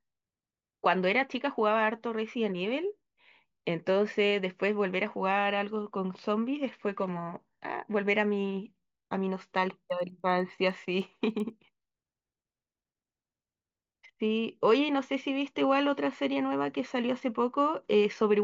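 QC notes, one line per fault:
9.6–13.0 s, resampler restarted on every block: the 16 kHz to 48 kHz conversion treats each 100 ms block in isolation, losing its neighbours' samples at the seams, so each block edge carries a small error, heard as regular ticks at 10 Hz riding on the speech.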